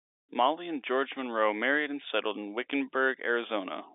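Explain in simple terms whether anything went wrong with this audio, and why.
Nothing went wrong here: the speech simply has the narrow, phone-call sound of ordinary G.711 telephone coding, which keeps only the middle of the sound range and leaves out the higher sounds, just as a normal landline call would.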